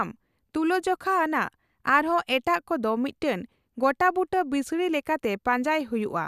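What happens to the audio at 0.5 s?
At 0.5 s the speech continues intact, with no dropout, click, distortion or other fault.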